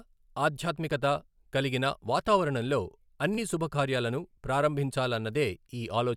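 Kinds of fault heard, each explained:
Bluetooth stutter: One audio packet of about 23 ms failed to arrive in time over the wireless link, so the receiver filled the gap by replaying the slice it had just played instead of going silent. In this speech clip that shows from 3.35 to 3.39 s as a brief repeat of a fragment, which points to a single lost packet. The speech then picks up further along, as though it had kept running underneath.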